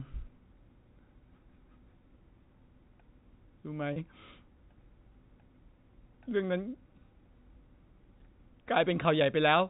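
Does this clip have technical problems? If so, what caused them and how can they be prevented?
Yes. At 3.93 to 3.96 s the speech briefly holds on a slightly buzzy, frozen tone. This is packet loss with pitch repetition: about 30 ms of audio, consistent with a single lost packet, went missing, and the receiver filled the gap by repeating the last pitch period of the G.711 telephone stream. Adding forward error correction, or a jitter buffer with enough depth on a more reliable network path, would prevent it.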